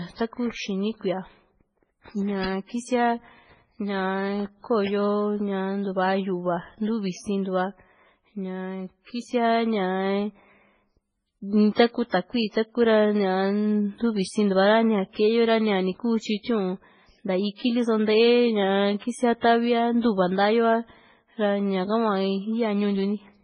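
Throughout the speech, the sound is dull and smeary, with nothing above 10 kHz, and two layers of compression grit are heard at once. This points to transcoding between lossy codecs, likely a low-rate MP3 re-encoded to AAC-LC, stacking both codecs' artefacts.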